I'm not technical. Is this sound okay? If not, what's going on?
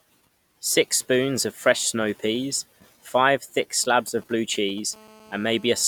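No. From about 3.84 to 4.80 seconds, under the speech, there's a galloping dit-dit-dit of short buzzes. These are GSM signalling bursts: an older 2G mobile phone close to the recording gear was briefly talking to its network, and the audio circuitry picked up those radio pulses and turned them into sound. The buzz pitch is about 217 Hz, the rate at which such phones pulse.

Then from about 4.93 to 5.83 seconds the pattern becomes a steady, hard, rasping drone at that same 217 Hz pitch, with a gritty, many-layered edge that has nothing to do with the speech. This is GSM phone buzz, the sound a 2G phone makes when it's actually on a call and transmitting in a steady stream of bursts. The recording equipment again turns those radio bursts into an audible buzz, this time without gaps.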